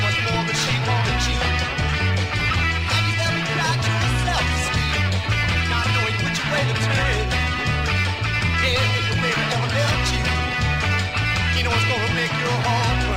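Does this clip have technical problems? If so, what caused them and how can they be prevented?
No, there are no technical problems to report.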